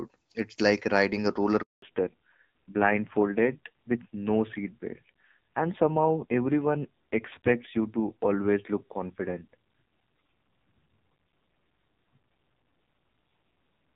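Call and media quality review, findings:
Dropout after "like riding a roller", 1.62 to 1.82 s: the sound fades within a few tens of milliseconds, then 200 ms of silence. Handover gap: the call switched networks and no speech frames arrived until the new link came up.

From 1.82 s to the end: duller, rougher sound with nothing above 4 kHz. Fallback to narrowband: HD Voice, lightly coded AMR-WB before the cut, which fits 12.65 kbit/s, dropped to a narrowband codec, consistent with AMR-NB near 5.9 kbit/s.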